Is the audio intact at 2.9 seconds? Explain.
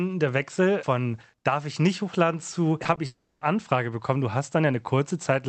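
No. From 2.83 to 2.98 s, just after "ich nicht hochladen zu", the speech turns choppy and robotic. This is repeated packet loss: four short gaps, the longest 20 ms, were patched by stretching the preceding sound, so about 40% of that stretch is filler.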